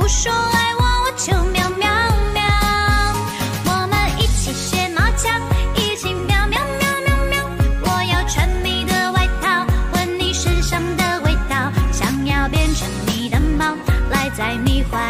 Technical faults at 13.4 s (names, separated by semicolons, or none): repeated frames